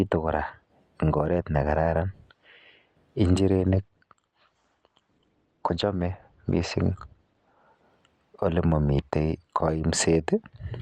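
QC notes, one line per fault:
3.66–7.66 s, adaptive stream at a lower bitrate: the speech abruptly loses its top end, with nothing above 8.8 kHz and a duller texture with added codec artefacts, then snaps back with no gap. This points to a switch from roughly 64 to 16 kbit/s Opus while the connection was slow.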